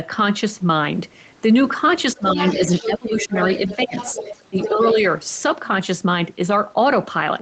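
Speech suppressed in double talk first appears at 2.14 to 2.38 s and returns at 2.81 to 3.36, 3.77 to 3.96 and 4.5 to 4.98 s. The talker's voice sinks in short dips, by roughly 20 dB and by about 15 dB in the last one. The likely cause is an echo canceller that could not separate the talker from loudspeaker echo and turned both down.

The other side's voice leaking through overlaps these dips, from 2.27 to 2.98 s and from 3.15 to 4.94 s. A second voice sits around 10 dB below the talker, likely a residue the echo canceller left when it failed to remove all of the loudspeaker playback from the microphone.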